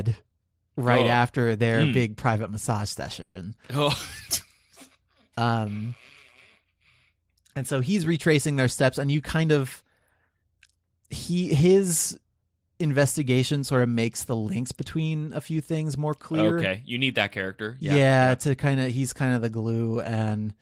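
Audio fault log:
3.21–3.37 s, call audio freeze: Right after "mm big private massage" the speech stops and a buzzy continuation of the last sound fills about 140 ms, then there is about 10 ms of silence before the speech resumes where it left off. Nothing is lost, but everything after it runs 140 ms late. The likely cause is delayed packets draining the jitter buffer. On a spectrogram, the last frame's harmonics repeat as flat horizontal bands that fade, with a thin blank sliver before normal speech returns.
9.07–10.69 s, jitter buffer speed-up: After "he's retracing their steps" the speech runs at about 108% speed until "he his", sounding hurried while the pitch stays the same. The receiver trimmed roughly 150 ms in total by cutting many short pitch-period-sized pieces to shrink a backlog of buffered audio. On a waveform, syllables look compressed in time. On a spectrogram, harmonic spacing is unchanged but the formant movements arrive sooner.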